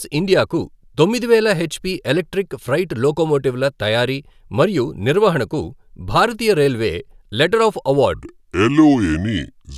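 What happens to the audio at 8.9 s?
At 8.9 s the clip is in a wrong sample rate stretch, from 8.14 s to 9.78 s, right after "భారతీయ రైల్వే లెటర్ ఆఫ్". The audio plays back slower than it was captured, which fits 44.1 kHz material run at 32 kHz. Speech slows to about 0.73× speed and drops about 5.5 semitones, sounding low and sluggish.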